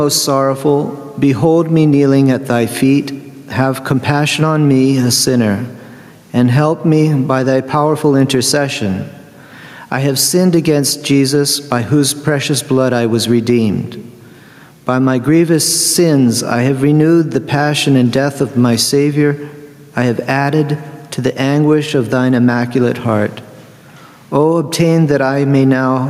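Input gain was likely set far too high, so a fast limiter clamps down on every loud sound throughout, giving gain pumping: the gain swings by around 10 dB.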